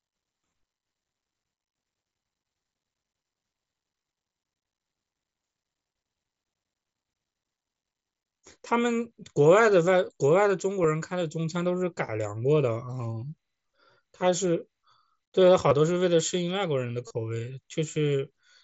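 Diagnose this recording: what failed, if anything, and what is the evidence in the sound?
Concealed Bluetooth headset packet loss on the wireless link to the phone. The single lost frame at 10.83 s is nearly hidden; gaps at 8.41, 12.07 and 15.69 s are short two-frame runs. From 17.07 to 17.11 s, the receiver repeats a matching slice of recent waveform, giving a brief buzzy tone and slight warble.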